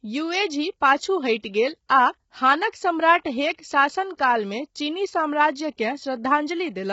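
Heavy low-delay AAC compression, likely AAC-ELD at around 16 kbps, runs throughout: the speech sounds rough and grainy, with noise between harmonics and nothing above 7.7 kHz.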